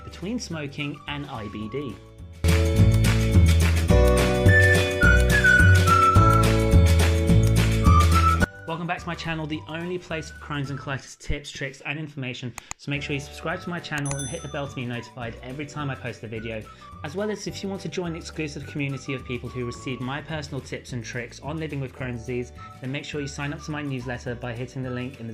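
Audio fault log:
No faults were found in this audio. Nothing in the sound calls for a time, a value or a cause.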